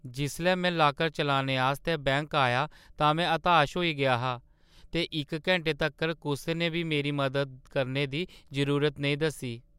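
No technical faults are audible anywhere in the speech recording.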